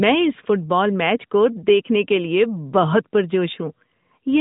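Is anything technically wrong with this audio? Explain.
No, nothing technically wrong stood out on listening to this speech clip.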